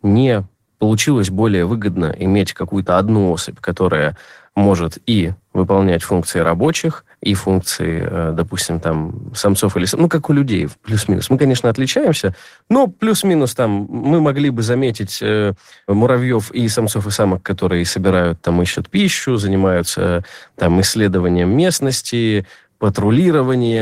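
No technical faults can be heard.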